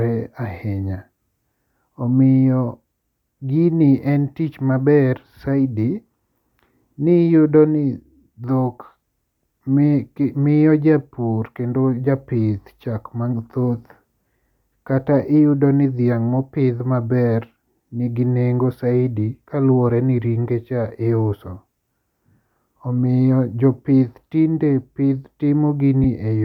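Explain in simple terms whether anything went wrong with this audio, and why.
Lost LE Audio frames at 26.04 s: a 7.5 ms gap, fitting one dropped Bluetooth frame, was patched by repeating the preceding sound with a noisy, smeared texture.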